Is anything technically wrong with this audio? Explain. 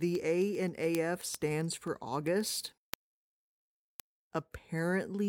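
Yes. Word clock ticks run through the speech from 0.15 s to 5.19 s, at a steady rate of roughly one every 0.15 s, around 40 in all. The receiving device seems to be running on its own clock rather than locking to the digital source, with a mismatch on the order of 150 ppm. Each time the two clocks drift a sample apart, a sample slips, and this is heard as a short click at a regular pace.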